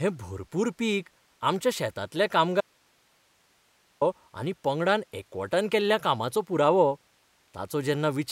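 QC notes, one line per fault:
2.61–4.01 s, audio dropout to a faint residue: right after "भरपूर पीक आमच्या शेतांतल्या" the speech cuts off abruptly for about 1.4 s, leaving only low hiss roughly 40 dB below the speech level, then returns just as suddenly. The likely cause is a brief loss of the wanted signal while the path downstream stayed live. On the waveform this shows as a flat, near-silent band with hard edges. On the spectrogram the harmonics vanish, leaving faint, even broadband noise.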